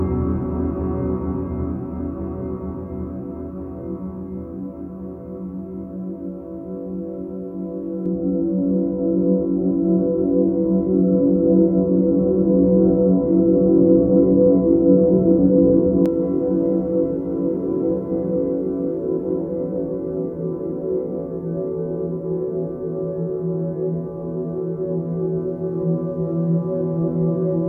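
From 8.06 to 16.06 s the sound turns dull and muffled. De-emphasis was applied wrongly, cutting treble so that 10 kHz sits about 11 dB below 1 kHz.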